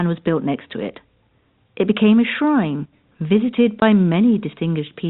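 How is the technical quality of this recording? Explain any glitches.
The recording has one glitch, and it is brief. The speech passes through telephone coding, which holds it below 4 kHz.

At 3.80 s there is packet loss filled with silence. One packet of audio, about 20 ms long, never arrived. The receiver had nothing to play, so it inserted silence in its place. The speech drops out for that instant. The gap has hard edges. The signal stops and restarts abruptly.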